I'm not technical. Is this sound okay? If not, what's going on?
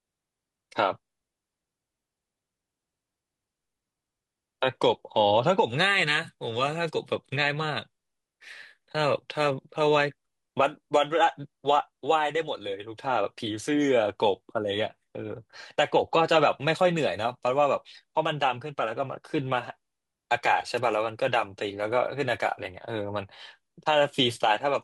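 No. There is a wireless microphone noise hit at about 20.76 to 20.80 seconds, a quick swish of static lasting only a few hundredths of a second. The speech passes through a radio microphone, and its signal briefly weakened as radio reflections cancelled each other out. For that instant, the receiver's own background hiss rose up before the signal recovered.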